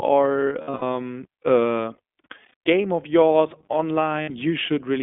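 Throughout, the speech carries iLBC codec damage: plainly rough, slightly synthetic voicing confined to about 250 Hz to 3.5 kHz, which points to the 15.2 kbps mode with 20 ms frames. A spectrogram shows an empty band above 3.5 kHz and thin low end.

Lost iLBC frames occur at 0.62 to 0.82 s (bursts up to roughly 70 ms), 2.49 to 2.54 s and 4.22 to 4.31 s. The decoder repeats the last pitch cycle with noise, giving held buzzy vowels. These appear as flat, smeared harmonic stripes and repetitive waveform cycles, with clean recovery immediately afterward.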